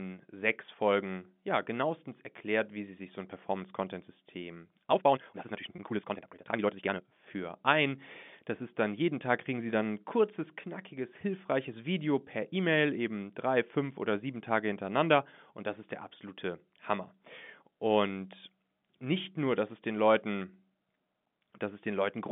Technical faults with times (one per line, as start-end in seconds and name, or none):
4.90-7.10 time-stretched section
5.76-5.78 packet loss with pitch repetition